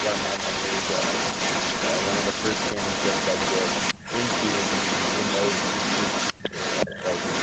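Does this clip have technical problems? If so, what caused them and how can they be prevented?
Yes, there are two kinds of fault. The first is an echo leak that runs from 0.0 to 6.34 s and again from 6.51 s to the end. There's a delayed copy of the speech trailing the original by about 0.38 s, and it's roughly as loud as the speech itself, which makes things sound smeared and doubled. The likely cause is a far end on loudspeaker whose echo canceller didn't strip out what its mic picked up, so that copy came straight back. To prevent it, have that side use a headset, or turn down the speaker and make sure echo cancellation is actually enabled.

The second is speech suppressed in double talk, at 3.95 to 4.04 s, 6.32 to 6.53 s, and 6.86 to 6.91 s. The speech dips briefly each time, by about 10 dB on the first, a near-total dropout of about 40 dB lasting around a fifth of a second on the second, and about 15 dB on the last. 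The likely cause is the echo canceller getting confused while both sides were talking and ducking everything, including the real talker. Headsets on both ends, so there's far less echo to fight, are the best fix.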